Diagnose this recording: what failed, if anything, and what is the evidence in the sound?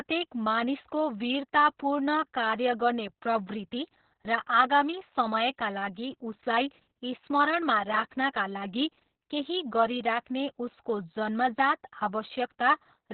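The codec stage failed, with Opus voice compression across the whole clip. Nothing sounds above 4.2 kHz, so the speech is muffled. It is also hoarse and slightly robotic. This points to narrowband SILK coding the excitation coarsely, which fits a bitrate near 6 kbps.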